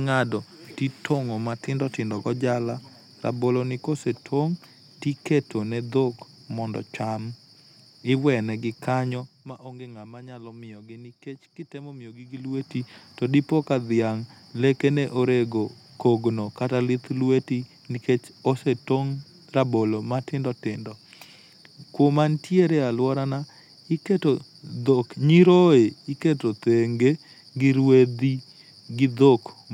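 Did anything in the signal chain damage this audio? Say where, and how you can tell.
Yes. Zipper noise appears from 12.2 to 12.72 s, just before "to dipo." A fast level change of around 15 dB is stepped rather than ramped. It happens in roughly 1 dB jumps, about thirty per second. Each jump leaves a small click, so the sound ticks while it moves. The stage is a gain control in the driver or buffer path. It updates once per block with no smoothing.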